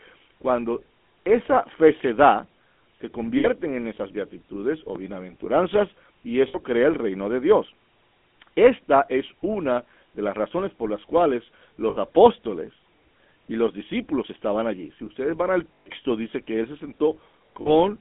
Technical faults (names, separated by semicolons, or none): GSM full-rate codec; lost GSM frames